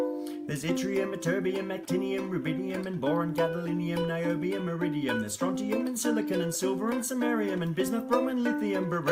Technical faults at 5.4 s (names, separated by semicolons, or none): none